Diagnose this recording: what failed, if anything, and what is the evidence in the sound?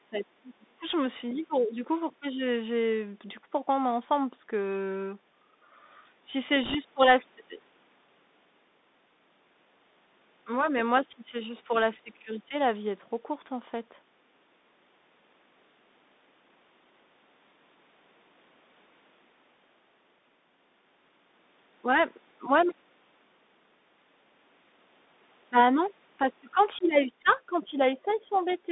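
Codec stage: the audio passes through the Bluetooth CVSD headset codec. The band runs from about 200 Hz to 3.7 kHz, with scratchy sibilants where the one-bit, 64 kHz delta modulator fails to track loud high content, and a granular hiss under the speech.

Call processing: the level dips sharply from 0.05 to 0.85 s, by around 30 dB at its deepest. From 27.46 to 28.48 s it dips by around 10 dB, and a slight dip returns at 28.66 s. This is likely speech suppressed in double talk by the echo canceller.

Radio link: from 6.63 to 6.76 s there is a burst of rushing crackle without loud clicks. These are bit errors on a Bluetooth voice link at an error rate of a few percent, each flipped CVSD bit adding only a small step that decays.

Call processing: a faint second voice at 28.08 to 28.14 s, and again from 28.34 s to the end, sits roughly 30 to 35 dB below the main speech. It is likely the other side's voice leaking through residual loudspeaker echo.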